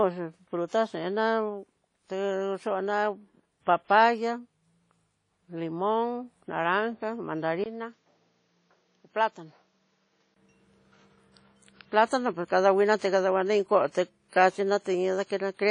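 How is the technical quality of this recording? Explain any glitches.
The speech carries plainly audible codec damage throughout, and one stretch changes character mid-recording.

Throughout, the sound rings and washes with a breathing hiss and nothing above 10.1 kHz, likely WMA compression at a low bitrate, consistent with about 32 kbps.

From 7.64 to 10.36 s, just after "limón naranja", a 20 ms gap leads into duller, about 5 dB quieter audio capped at 7.4 kHz, likely an input switched to a poorer device.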